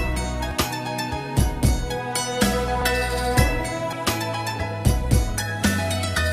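Dropped buffers, likely from overruns, at 0.51, 2.82, 3.93 and 5.63 s: each time a block of samples was overwritten before being read, so the sound jumps ahead with no gap, losing about a tenth of a second, and around 0.3 s at the last.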